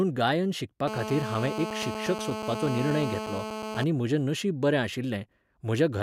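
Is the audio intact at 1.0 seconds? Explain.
No. At 1.0 seconds the speech is overlaid by GSM phone buzz, running from 0.88 to 3.84 s and ending just before "म्हजें नशीब बरें". A nearby 2G handset on a call transmits in bursts about 217 times a second, and the audio circuitry rectifies those radio pulses into a steady, harsh rasp at roughly 6 dB below the speech. Unlike smooth mains hum at 50 or 60 Hz, this buzz sits at 217 Hz and is thick with harmonics.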